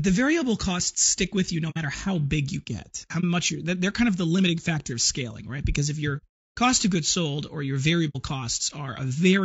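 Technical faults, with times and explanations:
Throughout: low-delay AAC compression. The speech sounds rough and grainy, with noise filling the gaps between harmonics and a thin, synthetic top band. This is likely AAC-ELD at a low bitrate. Its short frames resolve pitch poorly and the low bitrate leaves too few bits.
1.70 to 1.78 s: AAC frame loss with muting. A soft-edged hole falls between "stick with you no" and "how big you get". It sounds like about 60 ms of audio, two frames, zeroed out. Overlapping windows fade it out and back in.
3.20 to 3.24 s: AAC frame loss with muting. A shorter gap, about 30 ms, fits one lost frame. The decoder silences that frame's spectrum. The windowed overlap smooths both edges into a brief dip rather than a hard cut.
6.17 to 6.24 s: AAC frame loss with muting. Just before "cost of goods sold" the sound fades into a gap of about 60 ms. That matches two silenced frames. 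The soft fade-out and fade-in come from the overlapping windows.
8.09 to 8.16 s: AAC frame loss with muting. Right after "goods sold or your" comes another soft-edged hole of about 60 ms, two frames long. The lost spectrum is set to zero. The sound tapers out and back in.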